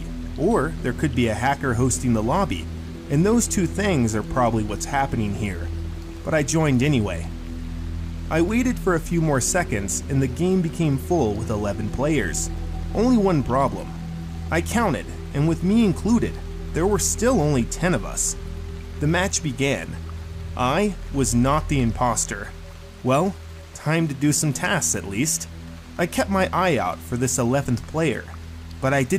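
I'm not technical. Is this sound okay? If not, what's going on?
Yes, nothing wrong can be heard here, so there's nothing to fix.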